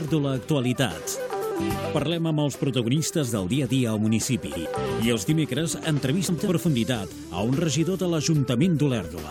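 At 1.32–1.52 s, 4.46–4.66 s and 6.28–6.48 s, frames out of order: two neighbouring 96 ms runs swap places, so each stretch flutters garbled.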